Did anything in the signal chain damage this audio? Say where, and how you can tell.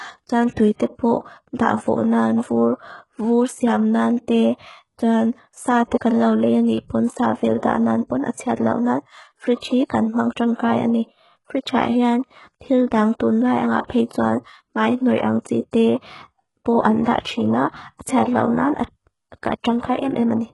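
Yes. HE-AAC compression is present throughout, introduced at the codec stage. Nothing remains above 11.5 kHz, and the treble below that sounds synthetic and gritty. The treble is likely rebuilt by spectral band replication from copied lower bands, with heavy damage that fits a bitrate around 12 kbps.

Pre-echo occurs at 0.52, 7.58, 8.32, 17.21 and 18.02 s, also from the codec. A hiss lasting 35 to 51 ms precedes each sharp onset and blurs it. The transform block spreads quantisation noise, sized for the loud attack, back into the quiet gap before it.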